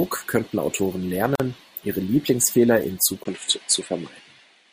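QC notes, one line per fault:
1.35 to 1.40 s, gap at a join of encoded pieces: a hole of about 45 ms cuts into continuous speech, with abrupt, smeared edges, then the speech resumes where it stopped. Two separately encoded pieces were joined with their start delay and end padding left in.
3.24 s to end, input switched to a poorer device: after a 20 ms silence the speech turns duller, with nothing above 11 kHz and a faint new noise floor well below the speech, at much the same level. The likely cause is recording switching mid-take to a narrower-band microphone.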